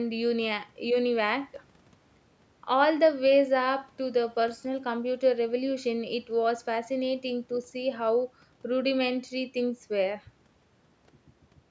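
Speech with no technical faults, carried through a call's microphone processing that trims the lowest bass and leaves nothing above 8 kHz, as expected for that path.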